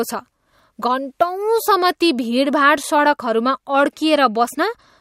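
At 2.83 s the speech drops into a block of digital silence about 5 ms long: most likely the output buffer was not filled in time, so zeros replaced the samples. The abrupt cut to silence and back, without any fade, is heard as a single tick.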